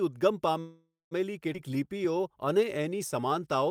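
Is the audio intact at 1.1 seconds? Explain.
No. A call audio freeze runs from 0.59 to 1.13 s, likely because delayed packets emptied the jitter buffer. The last sound is stretched into a fading buzz that drops to silence for about 0.17 s; the audio then resumes where it stopped, now about 0.52 s late.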